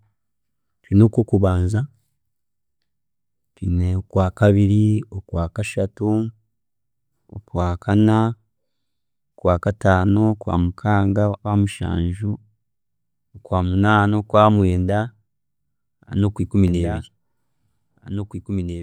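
From 16.68 s to the end, the speech carries a doubled audio track. A second copy of the same speech runs about two seconds behind the first. It sits roughly 10 dB below the original. The copy is full-band and dry, with no decay or room colour. It cuts in abruptly at 16.68 s. This most likely comes from the sound being captured again through a slower path, or from an edit that left two out-of-step copies.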